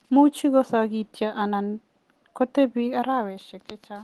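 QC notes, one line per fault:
No faults heard anywhere in the speech.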